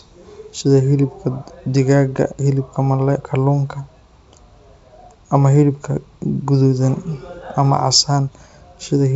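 No faults are audible in this speech, and the wideband telephone path sounds consistent with G.722 at 64 kbit/s, leaving at most a faint coding trace.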